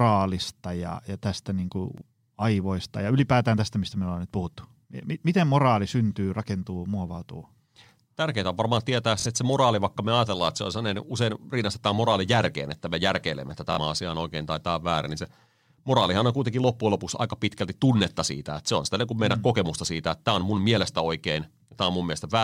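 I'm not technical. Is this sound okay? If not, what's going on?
No. There's Bluetooth stutter at 1.98, 9.20 and 13.73 seconds. The wireless link briefly lost some audio, and the receiver filled the gap by replaying the last tiny slice it had. That makes a quick buzzy repeat. The first, after "ja tästä niin kuin", lasts about 23 milliseconds. The other two, after "on varmaan tietää" and "että me järkeilemme että", last about 46 milliseconds each. The speech then picks up slightly further on, as though it had kept playing through the gap.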